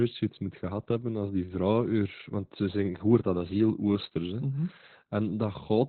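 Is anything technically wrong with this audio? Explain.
Yes. Opus voice compression runs through the whole speech clip, heavily damaged. Nothing survives above 4.2 kHz, which points to the codec's narrowband SILK mode at a very low bitrate, around 8 kbps. The linear-prediction coder keeps only a rough model of the vocal tract and quantises the excitation coarsely, so the speech sounds muffled, hoarse and slightly robotic. A simple low-pass filter would only dull the sound. This grainy, synthetic texture marks it as codec damage.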